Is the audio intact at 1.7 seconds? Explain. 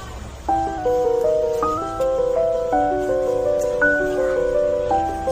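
No. At 1.7 seconds the clip is inside a drift correction step that runs from 0.78 to 1.78 s. Playback slows by about 5.8% and pitch drops about 103 cents, roughly a semitone, before snapping back to normal. This is likely a clock-matching routine that changed the playback rate in one step to rebalance its buffer. On a spectrogram every harmonic steps down together and then jumps back up. A waveform shows the same stretch slightly elongated.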